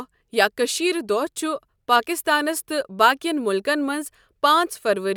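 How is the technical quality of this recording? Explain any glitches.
No glitches can be heard anywhere in the recording, and its technical quality raises no concerns. The speech continues without any interruption or disturbance to explain.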